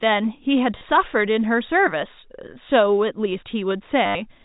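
Speech over telephone-band G.711 stutters robotically at 0.78 to 0.81 s and, longer, at 4.06 to 4.15 s. This is packet loss with last packet repeated: one packet replays across 30 ms and 90 ms gaps, buzzing near 100 Hz, which fits 10 ms packets.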